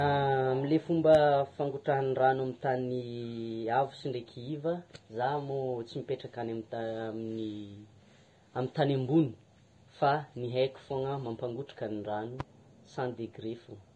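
Throughout the speech the high end sounds hissy and grainy, with nothing above 10.6 kHz. This is likely Vorbis compression at heavy settings, coarsely quantising the treble in a way that fits a bitrate near 30 kbps.

From 1.15 to 1.18 s a sharp single pop jumps well above the speech, and another, quieter, lands between 12.40 and 12.43 s. These loud pops are likely voltage spikes added to the signal, with the speech continuing beneath.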